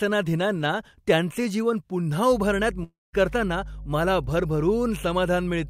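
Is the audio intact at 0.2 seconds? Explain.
Yes, the audio is intact at 0.2 seconds, with no fault to be heard at that moment.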